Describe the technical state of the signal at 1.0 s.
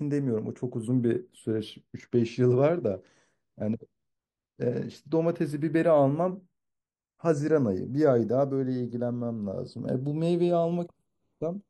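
At 1.0 s the speech carries channels drifting apart, present across the whole clip: the two channels run on clocks about 40 ppm apart, so their offset creeps toward a fraction of a millisecond. In mono, comb notches sweep slowly through the spectrum, a gradual flanging, unlike a fixed offset's static coloration.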